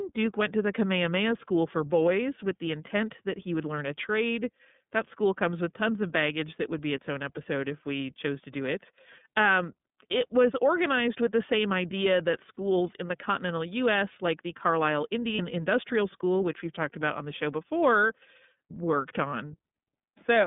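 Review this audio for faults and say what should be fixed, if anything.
The whole recording has passed through the iLBC codec. Its 30 ms frames and coarse texture fit the 13.33 kbps mode. The line band runs from 150 Hz to 3.6 kHz, so the speech sounds thin, slightly rough and synthetic, and the codec damage is plainly audible. On a spectrogram, energy stops sharply just below 3.6 kHz and is empty below 150 Hz, and the harmonics look smeared and grainy. Preventing this means carrying the call on a wideband codec such as Opus instead of iLBC.

Lost iLBC frames occur twice: at 12.55–12.57 s, between "the same idea that" and "in the continental", and again at 15.35–15.40 s. Each gap fits a single lost 30 ms frame. The decoder fills the hole by repeating the last pitch cycle mixed with noise, so a brief buzzy, held-vowel smear replaces the speech, and the voice recovers immediately afterwards because each iLBC frame decodes on its own. 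On a waveform, the gap shows as a short run of repeated cycles. On a spectrogram, it appears as flat horizontal harmonic stripes with added noise, with no formant movement. Reducing packet loss with jitter buffering, FEC or a more reliable network path would prevent these gaps.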